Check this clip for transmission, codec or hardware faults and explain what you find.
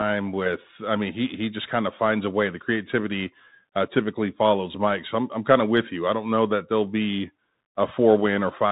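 There is one fault, present for the whole clip. Bluetooth CVSD headset codec, throughout: the speech passes through a narrowband headset link in which each sample is a single bit telling the decoder to step up or down, with an adapting step size, which fits a 64 kbps stream. Nothing above 4 kHz survives, so the speech sounds boxed in. Fast, loud high-frequency sounds outrun the step and distort, s sounds turn scratchy, and a granular hiss sits underneath.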